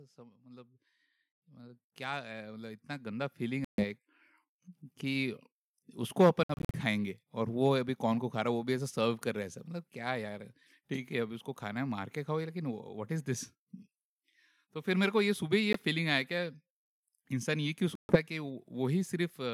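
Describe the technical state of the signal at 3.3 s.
At 3.3 s the speech and the background noise beneath it are swelling together, partway through a steady climb in level that runs from 0.14 to 5.47 s. This is automatic gain rising: the gain control judged the input too quiet and lifted its gain gradually, by about 16 dB overall.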